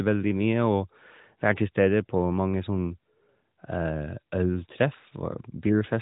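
No technical faults are audible.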